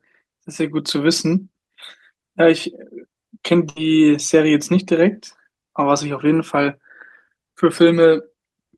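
At 3.69 s the speech breaks up in a burst of packet loss lasting to about 3.78 s. A short run of packets never arrived in time, so the receiver filled the hole by extending the last decoded sound and attenuating it, which is heard as about 64 ms of held, fading sound. When playback picks up again, roughly 60 ms of the original speech has been skipped, giving a jump in the delivery.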